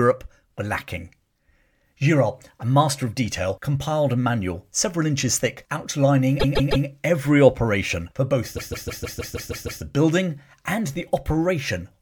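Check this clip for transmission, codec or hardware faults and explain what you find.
Two repeated-frames faults are audible. At 6.39 to 6.86 s, then 8.56 to 9.81 s, a 157 ms block replays three and then eight extra times, a stutter, adding 0.47 s and 1.25 s.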